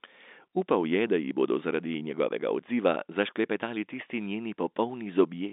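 Nothing faulty can be heard anywhere in this speech.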